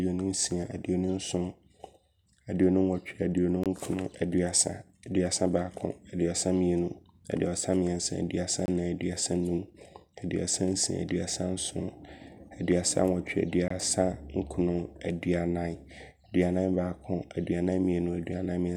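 At 3.64–3.66, 8.66–8.68 and 13.68–13.70 s, a gap between chunks inserts 23 ms of hard-edged silence every 5 s; unlike dropouts, nothing is lost, and speech resumes intact.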